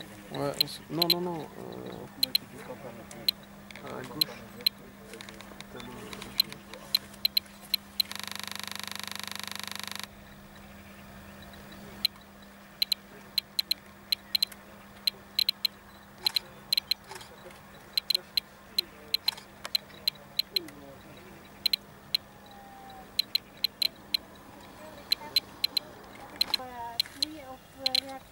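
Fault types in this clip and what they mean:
System hang loop: the system froze while the audio hardware kept replaying one 40 ms buffer, producing a rapid buzzing stutter at 25 Hz from 8.15 to 10.06 s.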